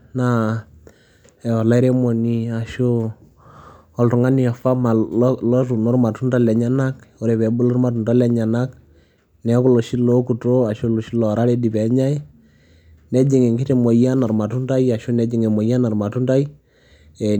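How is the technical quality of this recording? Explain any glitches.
Good news, there aren't any glitches to explain here, because nothing in the recording trips up technically at any point.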